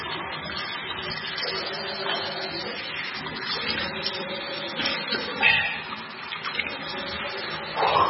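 From start to finish the audio carries heavy MP3 compression damage, likely from encoding at a very low bitrate around 16 kbps. Nothing survives above about 5.6 kHz, so the top end is sliced off flat and the sound is dull and boxed-in. With so few bits available, weak frequency components are dropped and restored from frame to frame, leaving a watery, swirling texture over the whole clip and blurring sharp onsets.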